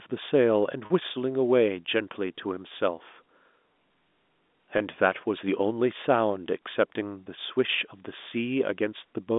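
Packet loss with pitch repetition occurs at 0.86–0.90 s, where about 40 ms went missing, roughly two 20 ms packets, and again at 4.78–4.80 s and 7.24–7.26 s. The receiver loops the last pitch period across each gap, so the speech briefly holds a slightly buzzy tone over the G.711 telephone band.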